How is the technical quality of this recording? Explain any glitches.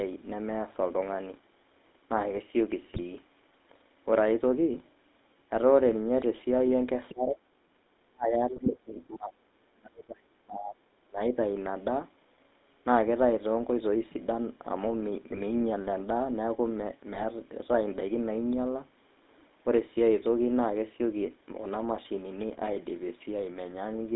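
The recording has clear telephone-grade damage: a coarse codec throughout, four bursts of corrupted audio, and three stretches where the level collapses.

GSM full-rate codec (whole clip): The sound carries the buzzy, gravelly texture of GSM full rate at 13 kbps, which rebuilds the signal from a vocal-tract model fed with sparse pulses. Only about 250 Hz to 3.7 kHz survives. A spectrogram shows a hard ceiling near 3.7 kHz with empty space above, and the call's microphone high-pass trims the lowest bass below that band.

GSM bit errors (2.88–3.01 s, 8.56–8.69 s, 15.32–15.43 s, 17.08–17.23 s): Flipped bits reach the decoder and corrupt its filter, pitch and gain values, producing brief squawks, pops and gargling. Each burst lasts about 0.1 to 0.15 s. On a spectrogram these appear as smeared, misplaced energy, and on the waveform as sudden level spikes.

Speech suppressed in double talk (7.11–7.43 s, 8.1–10.81 s, 11.06–11.21 s): The level dips by about 25 dB in the short stretches and by as much as about 35 dB across the long one, which lasts close to 3 s. 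The likely cause is an echo canceller that could not separate its own talker from the loudspeaker echo during simultaneous talk and turned both down. The waveform shows the envelope caving in, and the spectrogram fades toward blank.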